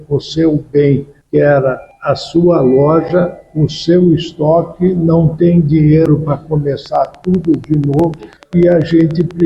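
From 6.86 s to 9.41 s, a train of clicks runs over the sound. The pulses arrive at a steady 10.2 per second, evenly spaced, for about thirty clicks in all. Each one has much the same sharp shape. They reach roughly the level of the sound itself, and are heard as a regular ticking. Something is injecting these pulses into the path, likely electrical interference from nearby equipment or a faulty connection or power supply.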